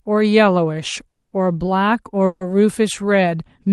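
At 1.11 s a call audio freeze stalls the speech for 0.2 s. The last sound trails off as a fading buzz, then goes briefly silent. At 2.26 s a second freeze fills 0.15 s with buzz. Both times speech resumes where it stopped. The likely cause is late packets emptying the jitter buffer.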